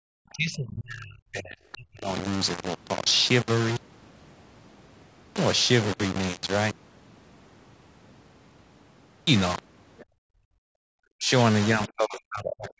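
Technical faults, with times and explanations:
Throughout, low bit depth without dither: grainy, gritty distortion tracks the speech, with error only about 10 dB below it, likely from undithered rounding to roughly 4 bits.
0.3–1.57 s, 1.74–2.13 s, 11.18–11.31 s, 11.75–12.8 s, speech suppressed in double talk: the voice dips by up to 30–40 dB, likely because the echo canceller ducked everything while both sides talked.
9.98–10.05 s and 12.68–12.72 s, other side's voice leaking through: brief scraps of a second voice, about 25–30 dB below the speech, likely loudspeaker echo the canceller failed to remove.
10.05–10.9 s, background gated by the echo canceller: the room sound drops by about 38 dB as the canceller clamps the microphone during playback, then returns when it releases.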